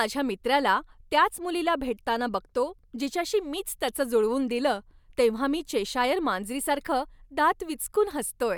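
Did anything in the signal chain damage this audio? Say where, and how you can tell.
No, nothing along the chain has audibly damaged this speech recording, and the signal carries no sign of degradation from any stage between capture and playback.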